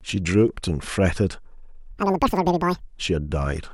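From 1.91 to 2.82 s, audio read two samples at a time plays twice as fast, an octave up.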